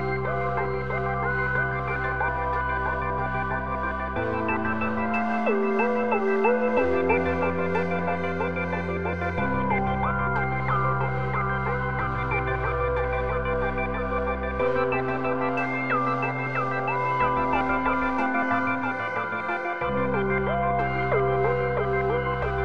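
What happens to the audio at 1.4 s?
At 1.44 s there is a single sharp click, most likely from dropped samples. Roughly one sample goes missing, so the waveform steps abruptly to a later value, and a spectrogram shows a thin vertical line.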